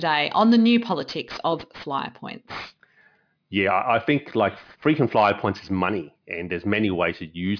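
Aliasing runs throughout. The audio was downsampled to an 11 kHz rate without filtering. Content above 5.5 kHz folds back as gritty, metallic hiss, roughly 25 dB down.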